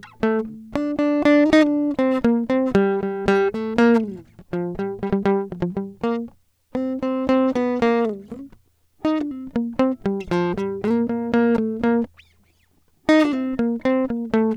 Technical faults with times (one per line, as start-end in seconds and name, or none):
none